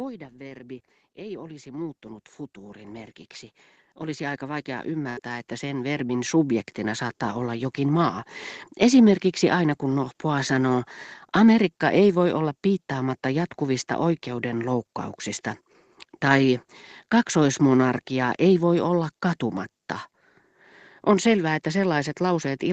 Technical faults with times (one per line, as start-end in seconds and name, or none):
0.37-7.17 automatic gain rising
5.09-5.19 burst of packet loss
6.07-6.11 short concealed packet loss